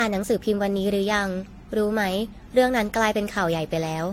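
Swirly, smeared and hollow from start to finish, the speech has consonant attacks that blur into their surroundings and a watery churn that feels heavier than a single lossy pass would leave. Nothing sounds above about 16.7 kHz. This is likely generation loss: the audio was re-encoded around five times, consistent with AAC-LC at bitrates between 64 and roughly 100 kbit/s. Each pass requantised on a shifted frame grid, stacking noise.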